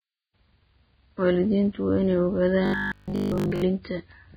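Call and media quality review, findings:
Vorbis compression, whole clip: hissy, grainy treble, roughened tones, smeared attacks. Likely a heavily starved Vorbis encode, consistent with roughly 15 kbps. The coarsely quantised residue becomes noise-like grain, not the watery warble of a dropout-concealing codec.

Robotic sound from repeated short buffers, 2.66 to 3.62 s: rigid metallic buzz at a fixed 50 Hz across most of the span, still loosely following the speech contour. Likely 20 ms buffers replayed while fresh audio is skipped. The buzz rate is constant, not voice-tracking as with tonal distortion.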